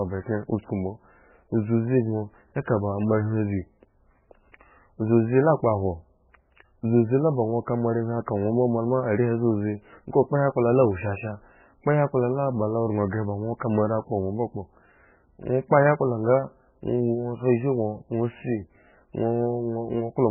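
Speech, and it's got heavy MP3 compression damage running the whole way through. Nothing comes through above 3 kHz, and the voice sounds watery and swirly, with chirpy, smeared consonants. That's likely a very starved encoder, something like 8 kbps, cutting the treble and dropping weak detail frame by frame.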